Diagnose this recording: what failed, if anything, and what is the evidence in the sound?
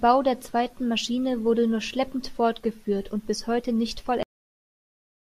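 The failure is a cut-off end at the storage or buffer stage. The speech breaks off at 4.23 s, right after "und bis heute nicht", in the middle of a sound rather than at a natural pause. It falls straight to digital silence with no decay or room tail, and that silence holds for the remaining 1.1 s. The final buffers of audio were never written to the file or passed to playback, so the sound ends where the data ends.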